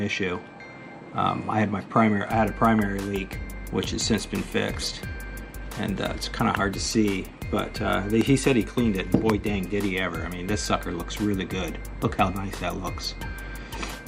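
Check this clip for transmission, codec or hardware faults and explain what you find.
Two loud pops stand out, from 8.21 to 8.23 s and from 9.30 to 9.32 s. Each is a single sharp crack lasting about 20 ms, with the sound continuing unbroken beneath it. The first peaks roughly 15 dB above the surrounding audio and the second about 20 dB. The likely cause is a brief voltage spike from a switch, connector, static discharge or driver glitch, which the downstream circuitry passes on as an abrupt transient.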